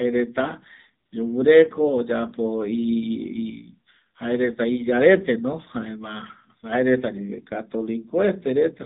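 Throughout, the speech sounds band-limited, buzzy and somewhat synthetic with nothing above 4 kHz, the plainly audible AMR narrowband mobile codec damage of a low bitrate, fitting roughly 7.4 kbps. From 1.06 to 1.12 s, the background gives way to smooth, steady hiss: AMR comfort noise, synthetic fill generated for 60 ms while no speech frames were sent.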